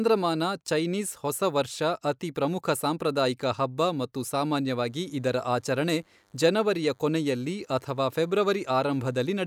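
A speech recording in which, from 4.76 s after "ಪ್ರಮುಖ ಸಾಂಪ್ರದಾಯಿಕ ಹಬ್ಬ ಮತ್ತು" until the end, a DECT cordless phone buzz sits faintly beneath the voice, well below the speech level. A nearby handset or base transmits bursts every 10 ms, and the audio circuitry rectifies them into a thin 100 Hz buzz. On a spectrogram it shows as evenly spaced horizontal lines at 100 Hz and its harmonics, and the waveform carries small pulses repeating every 10 ms.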